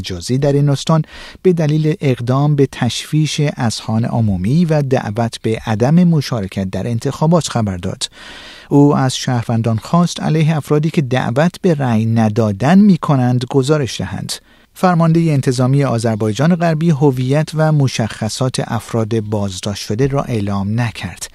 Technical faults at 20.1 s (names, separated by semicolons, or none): none